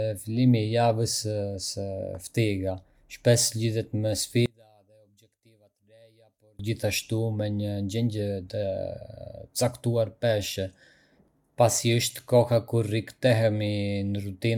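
From 4.46 to 6.59 s, just after "lidhet me", the speech drops by about 34 dB and turns faint. The likely cause is one channel inverted. Reversed polarity in one stereo channel makes the centred voice cancel when the channels are summed to mono.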